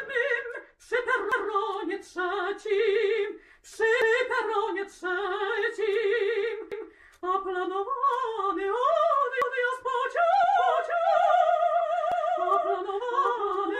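At 1.32 s, a short stretch of sound plays twice. The same stutter comes back at 4.02 s, 6.72 s and 9.42 s. These are overlapping chunks. The audio was handled in 2.5 s pieces, and each piece begins 200 ms before the previous one ended. So 200 ms repeats at every join, and the joins fall every 2.7 s. Each one is heard as a brief click and stumble.

From 10.58 s to the end, a doubled audio track appears. A second full-band copy trails the original by roughly 0.7 s, at about 5 dB quieter. It carries no reverb tail or room colour, and it enters abruptly. Its most likely cause is a second, slower capture path mixed in with the first. At 12.12 s, one more 200 ms overlap stutter lands on top of this doubled sound.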